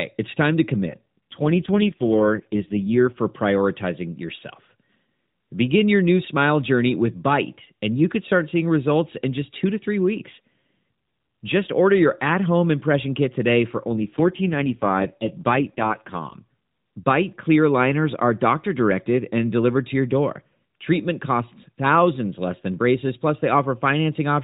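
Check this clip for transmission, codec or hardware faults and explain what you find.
Two AMR rate drops interrupt this speech, which travels over an AMR narrowband mobile codec with everything above 4 kHz absent and only light coding roughness at its normal rate. The first runs from 0.86 to 3.19 s, right after "it's time to" and ending before "prioritizing yourself". The second runs from 13.92 to 16.36 s, right after "impression kit today for". Each time the link forces the codec down from its top rate to its lowest, which fits a step from 12.2 to 4.75 kbps, giving bits to error protection instead. The bandwidth stays the same and nothing drops out, but the speech turns buzzy and synthetic until the rate recovers.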